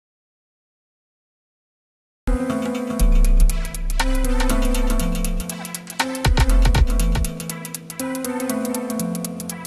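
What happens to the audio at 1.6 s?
At 1.6 s the audio is in an audio dropout to silence that is already under way when the clip begins and lasts until about 2.28 s. The input was likely lost while the recorder kept writing silence. Unlike a quiet passage or a noise gate, the gap holds no room tone at all, and the sound cuts back in mid-flow.

A doubled audio track also runs through the whole clip, though nothing of it can be heard inside the silent gap. Once sound returns, a second full-band copy trails about 400 ms behind at roughly 5 dB lower, likely from a second, slower capture path. Unlike an echo or reverb, it has no decay or room colour.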